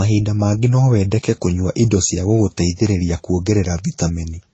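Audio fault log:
Throughout: transcoding between lossy codecs. Nothing sounds above 8.1 kHz, a hard ceiling on the spectrogram. The first codec's artefacts are heard together with a second layer of the next codec's own, likely from one low-rate codec, around 32 kbit/s MP3, re-encoded through a second, roughly 28 kbit/s Vorbis.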